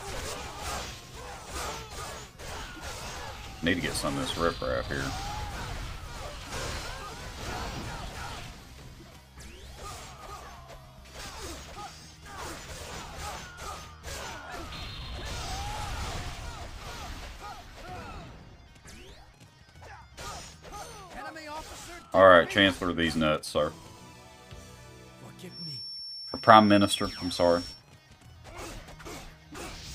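The loudspeaker-to-microphone loop has likely drifted to the edge of instability from 25.46 to 27.85 s, so the system rings at one frequency without tipping into a full howl. This feedback whistle sits at 5.4 kHz, roughly ten decibels below the main sound: a thin, steady-pitched tone riding behind the audio, slowly swelling and fading in level rather than growing, before it disappears at 27.85 s.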